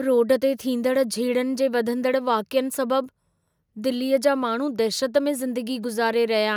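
A speech recording with no audible technical faults.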